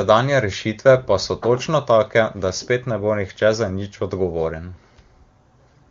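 No faults found; the speech comes through the AMR wideband (HD Voice) path at what sounds like one of its upper rates, with little or no coding damage audible.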